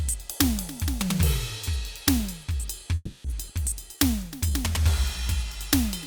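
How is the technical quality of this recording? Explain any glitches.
Two glitches interrupt the music a moment apart, both in delivery rather than recording.

From 2.95 to 3.27 s there is a call audio freeze, likely from packets held up until the jitter buffer ran dry. The receiver stretched the last sound into a fading buzz or hiss for about 290 ms, ending in a brief 20 ms silence, then resumed where it stopped. On a spectrogram this shows as smeared, flat horizontal bands tapering to a thin blank slot.

From 3.48 to 3.52 s a skip ahead follows. Roughly 70 ms of music is dropped so playback can catch up, and the two sides are butted together with only a 10 ms patch. The waveform shows an abrupt seam, and the spectrogram a sudden vertical discontinuity.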